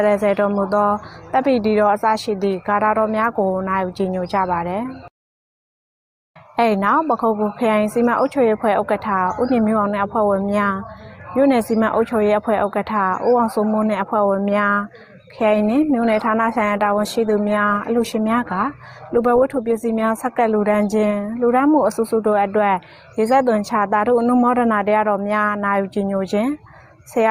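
From 15.39 s to 22.39 s there is a call bitrate drop. The link's bandwidth estimate fell, and the encoder was forced to spend far fewer bits. The sound turns coarse and watery, and the top end is cut away, so it goes dull and muffled. The quality fits a fall from about 48 kbps to about 18 kbps. It stays at its worst for roughly 4.7 seconds, then the detail returns as the bitrate recovers.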